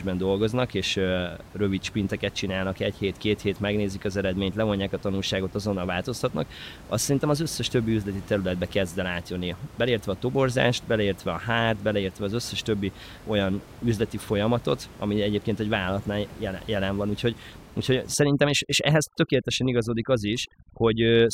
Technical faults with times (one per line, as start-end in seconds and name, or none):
18.14-21.34 overdone noise removal